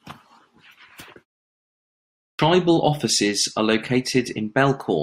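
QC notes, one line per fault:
2.16–2.39 s, clipped start after a pause: following a silence of about 1.0 s, the first 0.23 s of speech never reaches the output, so the phrase leading into "offices are" begins abruptly, with its opening sounds missing and no natural onset. The playback device has evidently dropped into a low-power or unlocked state during the gap and needs that quarter-second to wake and resynchronise before audio passes again. The pause itself stays quiet as expected.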